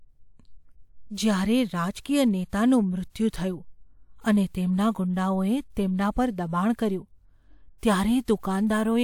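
No technical faults are audible.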